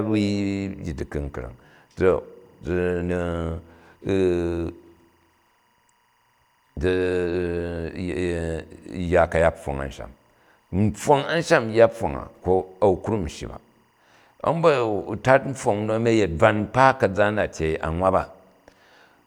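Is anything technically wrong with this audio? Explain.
Yes. Timecode bleed runs through the whole speech clip. Linear timecode from a neighbouring track or cable has leaked into the recording. Its square wave flips between two pitches near 1 and 2 kHz, giving a faint chirping warble about 45 dB below the speech. The rhythm fits code at 23.976 frames per second. The constant two-pitch flutter is what sets it apart from a steady whistle or mains hum, which hold a single fixed pitch.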